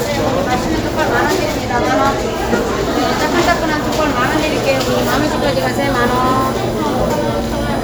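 From 4.24 s to the end, current drawn in 1 ms USB frames leaks into the audio path as USB whine, a steady 1 kHz tone roughly 20 dB below the sound.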